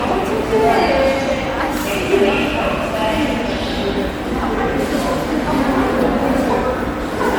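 Generation loss runs throughout. The sound is swirly, hollow and smeared, with blurred attacks. It likely comes from about seven passes through MP3, fitting 96 kbit/s.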